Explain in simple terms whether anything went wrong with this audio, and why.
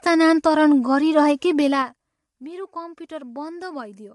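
Zipper noise runs from 1.58 to 2.14 s. Over that half-second the speech level falls a long way, but in small, sudden steps instead of a smooth fade, about fifteen times a second. Each step leaves a tiny click, and together those clicks sound like a quick ticking or zipping laid over the speech while it gets quieter. A smooth volume change would make no such sound.

Low-delay AAC compression, the kind of squeezing used in video calls, is the likely cause of damage heard through the whole clip. It is plainly audible: the speech sounds rough and grainy, with a noisy haze between the tones of the speech, and nothing above about 11.5 kHz, so the crisp top end is missing. The compression keeps delay short and throws detail away to save data, and that lost detail is what you hear.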